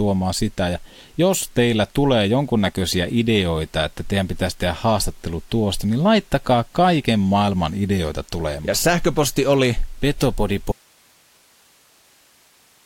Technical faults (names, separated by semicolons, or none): audio dropout to a faint residue